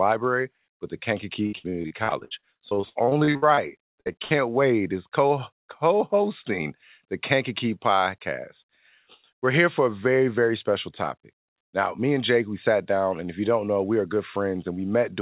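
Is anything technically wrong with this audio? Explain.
Yes. From 1.46 to 3.59 s, just after "but the", and again from 3.95 to 4.33 s, there is repeated packet loss: lost packets, the longest about 60 ms, are patched by extending prior sound, giving choppy, robotic audio. The narrowband sound, with nothing above 4 kHz, fits a G.711 call path.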